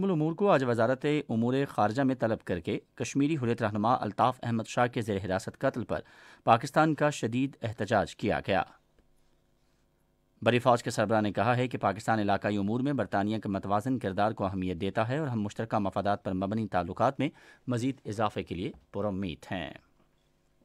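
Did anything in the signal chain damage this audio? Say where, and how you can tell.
No, nothing in the signal chain has damaged this audio, and none of the stages leaves a mark anywhere in it. No single point stands out as the place where the chain has altered the sound.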